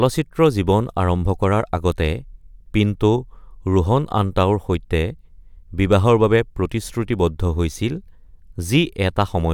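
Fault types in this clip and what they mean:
Nothing in the speech stood out as a technical problem on listening.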